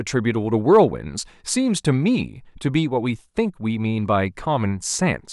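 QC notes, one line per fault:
0.73–0.80 s: hard clipping. For about 70 ms, peaks in the speech exceed the level the stage can pass by about 2 dB and are cut flat. The flattened tops add high harmonics, heard as a brief crackle on the loudest moments.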